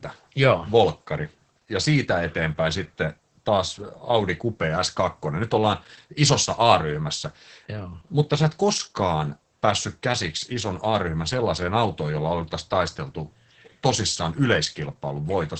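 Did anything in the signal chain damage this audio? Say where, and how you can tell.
Yes. Throughout, the speech sounds muffled, hoarse and faintly robotic, with nothing above about 8.6 kHz. That points to the codec stage: Opus voice compression in SILK wideband mode, consistent with roughly 10 kbps, where coarse linear-prediction excitation coding roughens the voice and the band is cut near 8 kHz.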